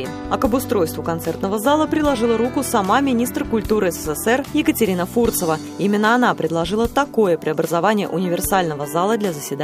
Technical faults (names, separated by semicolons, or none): none